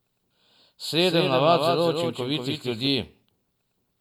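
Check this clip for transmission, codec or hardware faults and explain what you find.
There's one fault here: a doubled audio track running from 0.99 s to 2.87 s. For that stretch, a second copy of the speech trails the original by around 200 ms, roughly 5 dB quieter. It's likely the same signal being picked up again through a slower path and summed back in. You hear a clean, dry slapback with no room tail, and it switches on and off abruptly at those two points.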